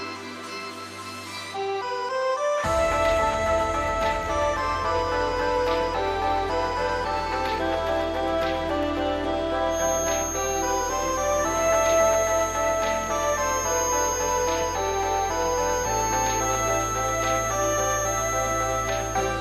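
From 9.66 s to the end, a feedback whistle at 6.4 kHz, roughly 10 dB below the sound, swells and fades slowly, likely from a loudspeaker-microphone loop; the spectrogram shows a thin horizontal line.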